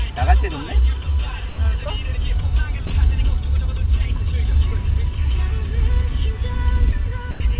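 Sound dropped by the voice detector, at 1.49 to 1.58 s, 2.87 to 2.90 s and 7.31 to 7.40 s: brief stretches of 90, 30 and 90 ms where the sound gives way to a flat bed of comfort noise before resuming. The likely cause is the sender's voice detector judging quiet parts of the sound to be background and pausing transmission, with the receiver filling each gap with synthetic noise. Throughout the clip nothing is heard above 4 kHz, pointing to a narrowband call codec such as G.711.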